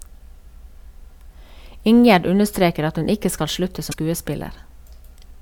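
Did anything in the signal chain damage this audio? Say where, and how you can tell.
Yes, at the codec stage: damaged data in the compressed stream. Right after "hun ikke skal slutte", from 3.88 to 3.94 s, a brief glitch replaces the speech. The decoder misread corrupted frames, lost sync and resumed at the next valid frame header.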